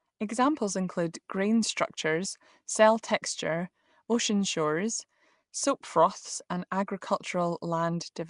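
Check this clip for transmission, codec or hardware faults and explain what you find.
One codec fault runs the whole way through this speech: it sounds like Nellymoser compression. The speech carries a rough, hissy halo with a smeared, underwater quality, and the damage is plainly audible. Nothing survives above about 10.6 kHz. The likely cause is Flash's old Nellymoser Asao codec, whose fixed two bits a sample, spread over blocks of 256, fits a rate around 44 kbps. Quiet bands get no bits and are filled with noise, which produces that hiss.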